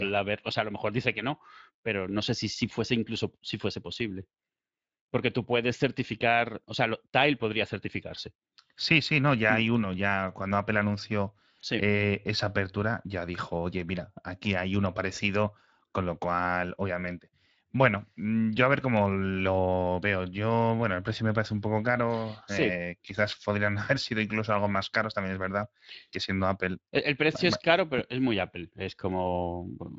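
Throughout the speech, a rough, hoarse, noisy grain is plainly audible. This is Speex codec damage, consistent with a rate near 20 kbps leaving too few bits for the excitation.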